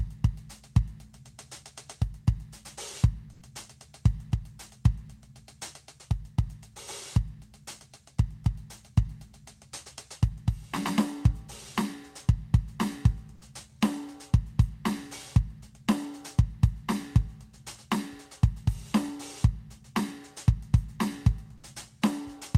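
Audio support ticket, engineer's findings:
Comfort noise in place of the background, 3.33–3.41 s: 80 ms of flat, featureless hiss about 2 dB off the real floor. Likely Opus DTX pausing transmission, receiver filling the gap.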